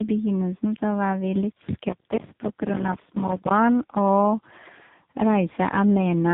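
Tandem speech coding throughout: rough, muffled, warbly speech with nothing above 3.8 kHz, which fits three successive codecs each recoding the previous one's output.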